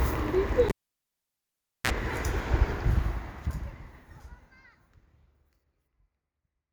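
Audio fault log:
0.69–1.90 s, cable pulled and plugged in: the live lead was pulled for 1.17 s, giving a pop, near silence, a 36 ms 60 Hz mains buzz, then a pop.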